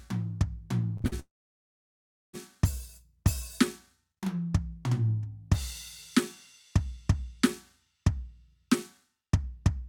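Brief smears and wobbles break up the music at 0.97, 1.01 and 1.08 s, a short concealed packet loss each time: 20 to 40 ms of audio arrived too late and was patched by extending the preceding sound. From 1.20 s the music buzzes or hisses briefly, then goes silent for just over a second before returning at 2.35 s with a stretch missing, likely a long network dropout in which the receiver ran out of data to conceal.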